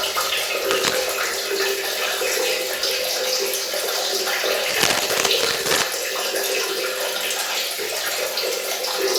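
From 0.70 to 0.96 s, and again for longer from 4.67 to 5.84 s, a burst of cable scratch noise rasps over the audio at roughly the sound's own level. It's likely a worn cable or connector being moved, its contact flickering and spitting uneven crackle.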